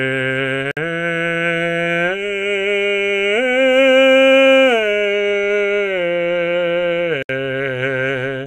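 At 0.71 s the music drops out for about 55 ms, then again at 7.23 s for about 67 ms: gaps at joins of encoded pieces, where untrimmed encoder delay and end padding leave silence with slightly smeared edges before the music resumes.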